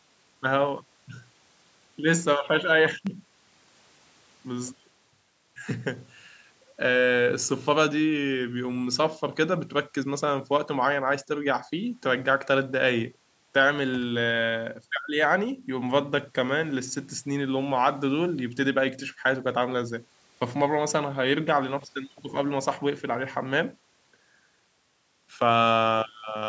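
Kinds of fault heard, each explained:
Loud pop: A single sharp pop sits on top of the speech from 3.07 to 3.09 s. It lasts under 30 ms and peaks around 5 dB above the speech. The speech carries on underneath without a break. The likely cause is a sudden voltage step or pulse entering the signal, such as a plug being moved, a switch, a static discharge or a driver glitch. The circuits after it shape that pulse into this brief thump.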